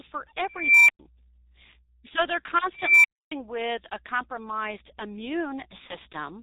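The whole speech recording is muffled and hoarse, with nothing above 4 kHz and consonants smeared together. The damage is heavy and fits the G.723.1 codec at about 6.3 kbit/s. Its 30 ms frames and slowly updated voice model cannot follow quick changes in the speech.

From 0.52 to 0.99 s a beep at around 2 kHz swells over about 0.37 s until it clips hard. About 0.11 s of silence follows. The same thing happens from 2.75 to 3.32 s, building over about 0.29 s before a silence of about 0.28 s. Both are an unstable filter: a recursive filter with bad coefficients feeds its output back until it runs away and overflows, and the output drops out until the filter resets.

Between 5.87 and 5.97 s the speech briefly turns into a stretched, fading smear and stays weak and distorted for a moment afterward. This is VoIP packet loss concealed by the speech codec, and the gap fits a single lost 30 ms frame. 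The decoder extended its last pitch and filter shape with falling gain. Because each frame builds on the one before, the voice took a little while to recover.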